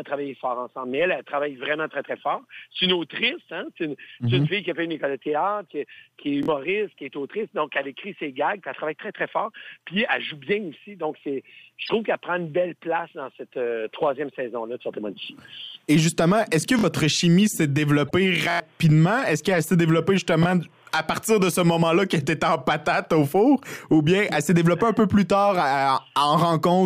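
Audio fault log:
6.43, 16.79, 18.51 and 20.43 s, repeated buffer: new audio arrived late, so a 23 ms slice, which fits a 1024-sample buffer, plays two, two, four and one extra times. Identical copies meet at hard joins, giving a rattling stutter, longest at 18.51 s.
11.85 and 18.07 s, damaged data in a compressed stream: for about 0.05 s each, corrupt bytes knock the decoder out of frame sync while it searches for the next header, producing a short glitch rather than exact repeats of what came before.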